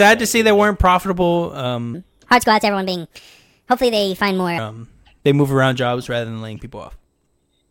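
Right after "see they weren't profitable", from 1.94 to 4.58 s, a section at the wrong speed runs 1.4 times fast, so the speech turns hurried and about five semitones higher, likely from playback against the wrong clock. A spectrogram shows harmonics shifted upward and syllables squeezed closer together.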